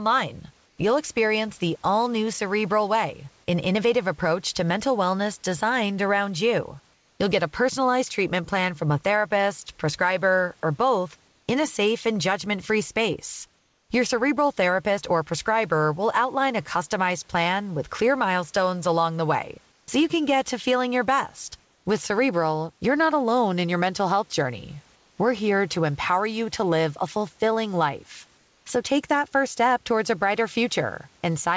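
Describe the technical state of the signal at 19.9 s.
Comfort noise in place of the background runs from 19.72 to 19.88 s, likely from discontinuous transmission pausing the sender. For 160 ms the real background becomes steady, featureless hiss about 3 dB quieter, appearing on a spectrogram as a smooth, texture-free band below 8 kHz.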